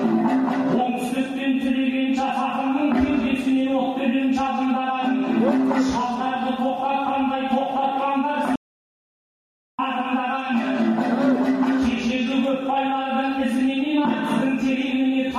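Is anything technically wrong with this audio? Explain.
Yes. Audio dropout to silence, 8.56 to 9.79 s: the input was likely lost, leaving 1.23 s of silence with no room tone before sound resumes abruptly.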